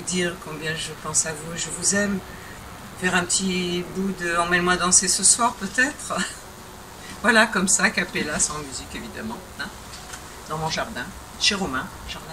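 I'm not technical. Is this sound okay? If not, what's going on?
No. A DECT cordless phone buzz runs through the whole recording, from start to finish. It's a thin, steady buzz sitting quietly underneath the main sound. A cordless phone or its base station nearby sends a short radio pulse 100 times a second, and the recording equipment picks up that radio energy and turns it into audible noise. The result is a 100 Hz hum with a buzzy, harmonic-rich edge.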